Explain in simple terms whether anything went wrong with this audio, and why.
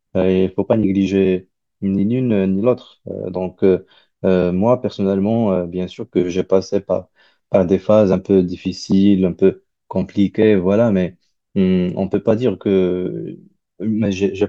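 Nothing went wrong with this speech recording; you can listen all the way to the end without hearing any glitch, dropout or other problem.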